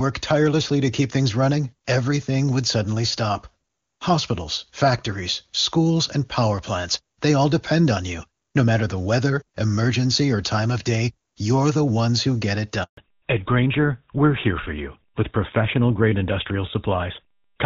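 A speech recording in which the call audio cuts out at 12.83 s for 140 ms, until 12.97 s: a handover gap, where the link switched networks and no frames arrived. The sound fades within a few tens of milliseconds rather than clicking off, and the silence is a single break, not the scattered holes of packet loss. From 12.97 s to the end, a fallback to narrowband removes everything above 4 kHz, which fits a drop from the AMR-WB HD Voice codec at 23.85 kbit/s, heard as clean and wideband before the gap, to GSM full rate. Unlike a low-rate wideband codec, which turns raspy while keeping its treble, this cuts the top band off outright.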